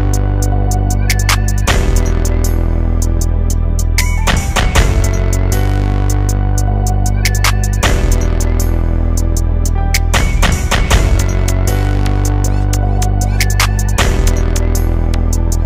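No technical faults can be heard anywhere in this recording. There are no dropouts, glitches or other disturbances at any point.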